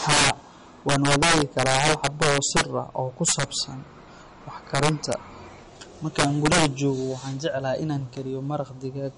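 Low-bitrate audio saved at a high bitrate, throughout: the speech has nothing above 10.6 kHz and keeps low-rate MP3 smearing, likely from heavy compression later re-encoded at a generous bitrate.

Integer overflow at 0.09–0.30 s, 0.89–2.61 s, 3.28–3.43 s, 4.75–5.13 s and 6.19–6.66 s: peaks driven about 4 to 11 dB past full scale wrap to the opposite sign instead of limiting, producing violent cracks far harsher than clipping.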